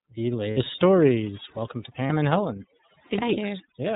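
From start to finish the speech is hit by overdone noise removal: the reducer is clamping frequency bands whenever they sit near its noise estimate, so the background drops and breaks up into little twinkling specks, and the quieter parts of the voice get pulled down too.

Under that runs the iLBC codec. It's narrowband, so nothing gets through above 4 kHz, and the plainly audible coding damage gives the voice a slightly rough, synthetic edge. The 30 ms framing fits iLBC's 13.33 kbps mode.

There are two spots with lost iLBC frames. From 0.51 to 0.58 s, about 60 ms goes missing, which fits two frames, and the decoder covers it by repeating the last pitch cycle with some noise mixed in, so you get a brief held, buzzy vowel. The same happens from 2.07 to 2.11 s, a gap of about 30 ms that fits a single lost frame. Both times the voice comes back almost straight away, because each iLBC frame decodes without needing the one before.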